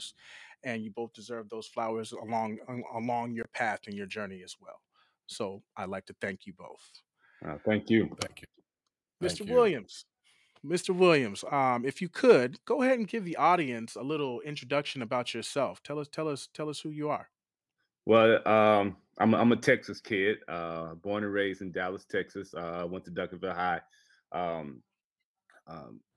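Nothing goes wrong anywhere in this one. There are no dropouts, glitches or distortion to point to, and there's nothing to flag at any point along the way.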